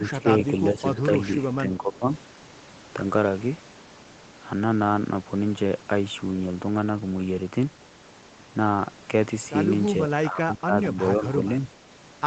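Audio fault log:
0.00–0.28 s and 10.07–11.01 s, speech suppressed in double talk: The voice dips briefly and slightly at first, then deeply, about 15 dB, for most of a second later. This is likely an echo canceller muting the talker while the far side speaks.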